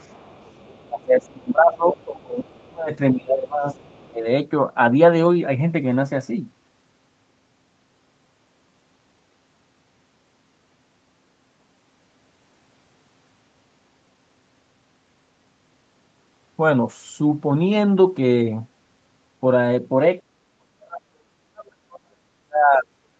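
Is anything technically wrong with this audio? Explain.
Yes. This speech clip, carried over a call path whose audio tops out around 8 kHz, shows two related echo-control faults.

Other side's voice leaking through appears from 0.00 to 0.88 s, again at 1.93 to 2.02 s and 2.45 to 2.61 s, and from 3.71 to 4.10 s. A faint second voice sits under the talker, about 30 dB down in the first and last spans, about 20 dB down in the brief 1.93 s scrap and about 35 dB down at 2.45 s. The likely cause is loudspeaker playback reaching the microphone and surviving the echo canceller. On a spectrogram it shows as weak, separate harmonic striations beneath or between the main speech.

Speech suppressed in double talk runs from 0.85 to 3.76 s, where roughly two seconds in total are pulled down by as much as about 25 dB. It recurs briefly from 4.10 to 4.26 s with a dip of about 15 dB, and then from 20.21 s to the end at 23.19 s with drops of around 40 dB. 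With both sides talking, the canceller likely treated the talker as echo and ducked everything. The talker's voice fades, thins or breaks into pieces. On the waveform this shows as sudden envelope notches, and on a spectrogram as gaps or faded bands across the speech.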